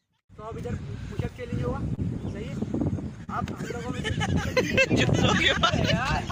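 Small timing hiccups recur unevenly across the whole clip, from clock drift between sender and receiver: the sender's clock runs about 2 percent slow, so the jitter buffer keeps draining. At 1.95 to 2.00 s and again at 3.24 to 3.30 s the sound is briefly held too long with a slight buzz or dip. Each is a short stall from a late packet, with the last sound stretched by 28 ms and then 39 ms before playback resumes where it left off.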